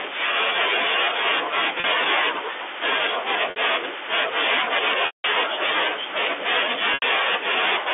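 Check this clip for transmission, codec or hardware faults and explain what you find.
The clip has four dropouts in transmission, heard through narrow telephone-band G.711 coding. Packet loss with pitch repetition occurs at 1.80 to 1.84 s (40 ms), 3.50 to 3.56 s (60 ms), 5.06 to 5.24 s (180 ms) and 6.94 to 7.02 s (80 ms). Packets went missing, and the receiver covered each gap by replaying the last pitch period and fading it out. The brief gaps sound like a held, buzzy tone. The 180 ms gap fades into silence before the speech cross-fades back.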